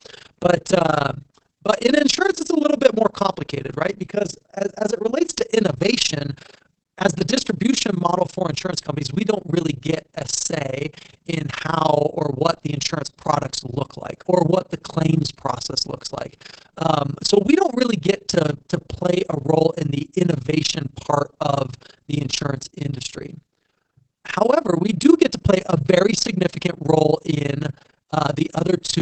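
Overlap-add ripple runs through the whole recording. The speech was split into windowed frames and rejoined with overlaps that don't sum to constant gain, so the level dips by about 60 dB once per frame, around 30 times a second. This gives a harsh flutter.

Opus voice compression is also present throughout, and the damage is plainly audible. The SILK linear-prediction coder is working in wideband, so nothing reaches above 8 kHz, and its coarse excitation leaves the speech muffled and hoarse. This points to roughly 12 kbps with 20 ms frames.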